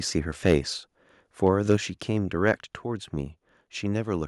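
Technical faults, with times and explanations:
0.45–0.55 s, 1.46–1.75 s and 2.48–2.51 s, microphone overload: the loudest peaks crackle harshly, pushing up to about 5 dB past the limit, likely from input gain set so high the converter flattens their tops.
1.77 s, microphone volume stepped down: speech and background drop abruptly by about 4 dB just after the distorted peak, likely the call software cutting input gain in one step.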